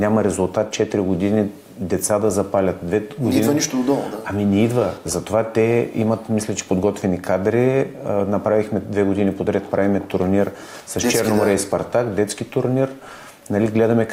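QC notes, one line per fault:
No faults found. Nothing in the audio calls for a timed entry.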